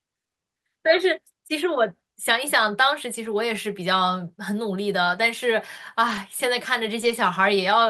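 At 3.25–3.27, 5.05–5.19, 6.07–6.17 and 7.01–7.11 s there are lost packets rebuilt from error correction. The decoder played the low-bitrate backup copy carried in the following packet, so nothing drops out. Those moments just turn briefly rougher and noisier.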